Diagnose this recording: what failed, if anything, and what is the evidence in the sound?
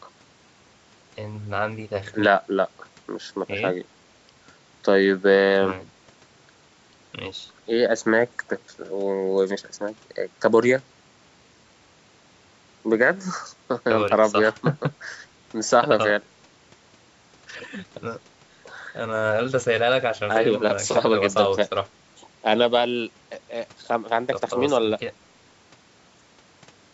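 Nothing stood out on listening to this speech recording; the trimmed low bass and the top ending around 8 kHz are what the call's microphone processing normally leaves.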